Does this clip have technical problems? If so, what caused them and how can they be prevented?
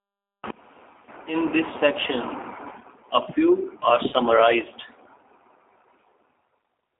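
Yes. Throughout, the speech passes through a G.729 codec at 8 kbit/s, which rebuilds it from a filter and a few pulses, leaving a band of 250 Hz to 3.7 kHz and an audible rough, synthetic edge. Using a wideband codec such as G.722 or Opus at a higher bitrate would prevent this.

From 4.09 to 4.13 s, VoIP packet loss concealed by the speech codec drops about 30 ms, which fits a single lost packet. The decoder extrapolates its last frame, so the sound turns briefly stretched and weak before recovering. A jitter buffer with forward error correction, or a less congested network path, would prevent it.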